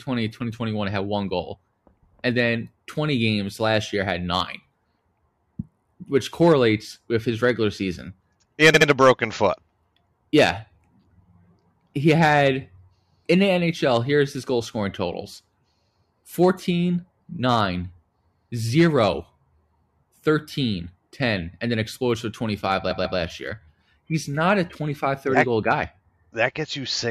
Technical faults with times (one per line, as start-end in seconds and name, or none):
8.73-8.87 repeated frames
22.90-23.18 repeated frames